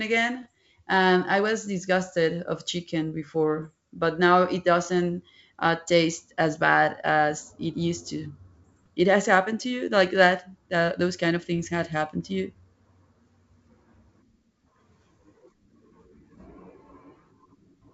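Pops and rough bursts at 0.42 s, 3.62 s after "was disgusted of chicken", and 8.64 s after "as it used to" are bit errors on an ADPCM link. Flipped bits throw off the decoder's step size and prediction, so each error rings on briefly.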